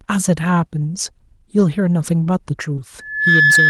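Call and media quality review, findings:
Lost packet rebuilt from error correction, 1.59 to 1.61 s and 2.77 to 2.79 s. Rougher, noisier 20 ms patches, no gap. Opus in-band FEC: each dropped packet replaced by the low-bitrate copy carried in the following packet.

Short concealed packet loss, 2.75 to 2.80 s. Brief smear around the second rebuild. Jitter buffer/decoder PLC: 20 ms missing, about 14 ms synthesised by extending the prior signal, then cross-faded back; adds a few milliseconds of delay.

Loudspeaker feedback squeal, 2.99 s to end. Steady 1.7 kHz tone swelling over roughly 0.3 s to around 5 dB above the speech. Acoustic loop: mic picks up its own loudspeaker, loop gain above unity at 1.7 kHz.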